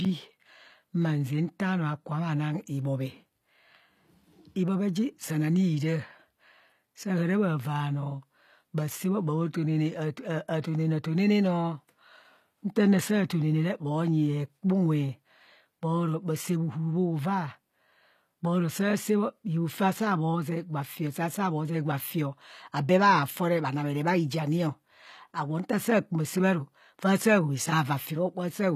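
From the first second to the end, the speech has that telltale HE-AAC compression sound, with the damage plainly audible the whole way through. The upper band is synthetic, most likely rebuilt from copied lower frequencies rather than coded directly, so the s sounds come out gritty and lispy and the treble doesn't quite match what sits below it. Nothing reaches above 15 kHz, and the overall character fits a low bitrate around 24 kbps.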